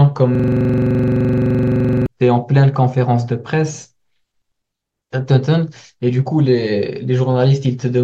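From 0.35 s to 2.06 s, a system hang loop occurs: the computer or driver stalled while the audio hardware kept replaying the same ring buffer. A single 42.67 ms slice of the speech repeats exactly, about forty times, which fits a 2048-sample buffer. Cycling at 23.4 Hz, the repetition turns into a rapid, rattling mechanical stutter, a fixed fragment hammering in place until normal playback resumes.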